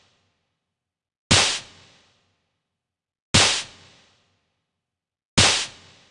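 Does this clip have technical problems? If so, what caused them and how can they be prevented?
Yes. A wrong sample rate runs throughout: the sound plays at half speed and a full octave (12 semitones) low, which fits 48 kHz material played back at 24 kHz. Prevent it by resampling to the device rate or setting playback to match the file.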